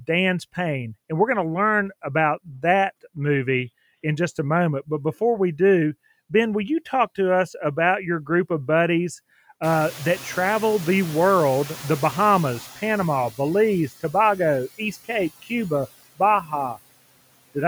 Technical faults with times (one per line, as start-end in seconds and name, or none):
0.00-17.67 noise suppressor artifacts
9.63-13.10 noise suppressor catching up
16.43-16.52 speech cut by the noise suppressor